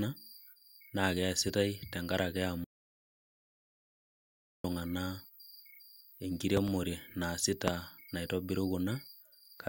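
A playback stall begins at 2.64 s: the speech cuts off in mid-flow and the output stays silent for 2 s, until 4.64 s, before the sound resumes. The likely cause is the player running short of data or having its output thread blocked, so nothing reached the output until it caught up again. The gap is long enough to break the phrasing outright.

A loud pop follows between 6.57 and 6.70 s. Two sharp clicks in quick succession sit on top of the speech, which carries on underneath, peaking about 15 dB above it. A second loud pop, single and harder, hits at 7.68 to 7.70 s, peaking about 25 dB above the speech. Both are consistent with sudden voltage steps or pulses, likely from a switch, static discharge or a driver glitch, that were added to the signal and shaped into brief thumps by the circuitry downstream.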